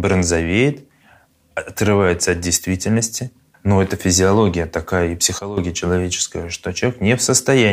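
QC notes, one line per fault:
5.39–5.57 s, sudden gain jump: after "это физиология такая и", the sound and background noise drop together by about 13 dB, likely from an unramped digital gain step.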